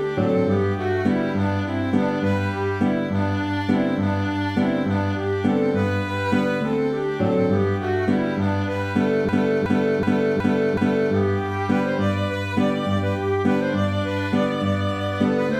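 At 9.29 s a system hang loop begins and runs to 11.15 s. The machine or its driver stalled, but the sound hardware kept replaying its ring buffer. One slice of about 0.37 s repeats five times, at 2.69 Hz. That length fits a 16384-sample buffer. Because the slice is long, it sounds like a slow, chopping stutter rather than a buzz. Almost no audio seems lost when playback resumes.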